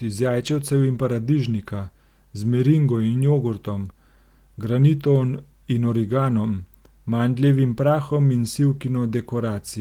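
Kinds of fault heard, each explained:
No technical faults are audible.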